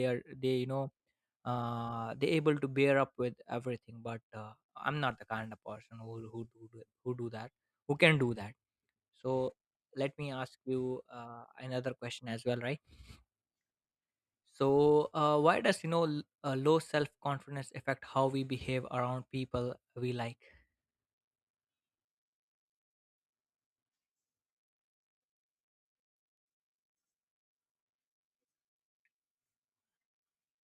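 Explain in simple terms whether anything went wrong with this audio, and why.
Listening through the speech, nothing stood out as having gone wrong, so there's no problem here to explain.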